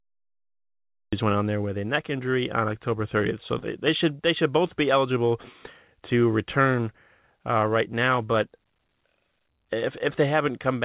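The clip opens with a cut-off start. There's dead digital silence from 0.00 s until the audio suddenly kicks in at 1.13 s, already partway through the speech. The capture or stream clearly started late, so there's no natural onset or fade-in. The sound just appears mid-flow, which gives that abrupt, chopped-in feel at the top.

Next, from about 3.59 to 3.65 s, there's a short concealed packet loss. Roughly 30 ms of the call never made it to the decoder in time. The receiver patched the gap with about 29 ms of synthesized continuation of the preceding sound, then blended back into the real signal. You hear it as a brief smear or wobble in the speech rather than a clean dropout, within the 4 kHz-limited telephone-band sound of the G.711 call path.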